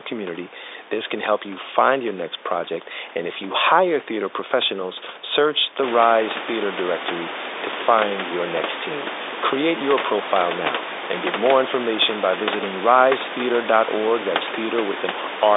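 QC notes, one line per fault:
Nothing stood out on listening.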